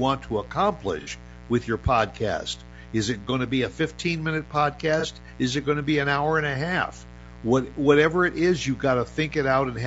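Mains buzz runs through the whole clip, about 20 dB below the speech: switching spikes twice in every 60 Hz cycle add a steady, raspy buzz with harmonics reaching several kHz. Low-delay AAC compression is plainly audible throughout: the speech sounds rough and grainy, with noise between harmonics and an altered top band, likely AAC-ELD at around 32 kbps. AAC frame loss with concealment appears from 1.01 to 1.10 s, just before "with your podcast", and again from 5.00 to 5.05 s. The decoder fills each gap from the last good spectrum, leaving a smeared, noisy patch. The gaps fit roughly 60 ms and 30 ms of lost audio, respectively.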